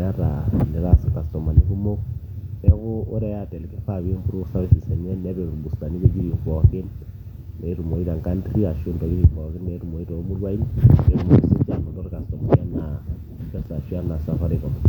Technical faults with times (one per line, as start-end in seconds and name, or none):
none